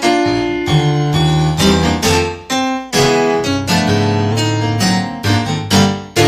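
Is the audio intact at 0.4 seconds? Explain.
Yes, the audio is intact at 0.4 seconds, with no dropout, click, distortion or other fault at that point.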